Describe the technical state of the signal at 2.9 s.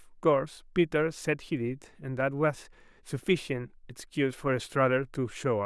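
At 2.9 s the speech signal is intact, with no audible fault at that point.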